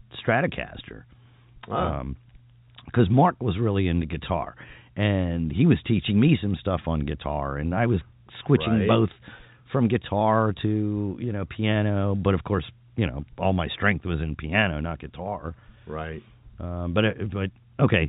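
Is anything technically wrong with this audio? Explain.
No, nothing technically wrong stood out on listening to this speech.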